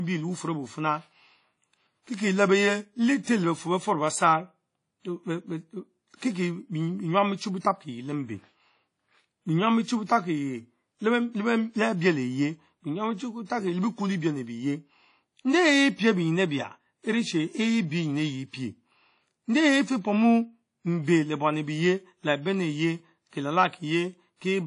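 WMA-style compression damage runs through the whole speech clip, from start to finish, and it is plainly audible. The likely cause is a low-bitrate transform codec, with the sound pointing to roughly 32 kbps. Nothing remains above about 10.1 kHz, so the top end sounds dull and clipped off. Quantisation noise smeared across long transform blocks gives a ringing, washy quality, and the hiss swells and fades along with the speech.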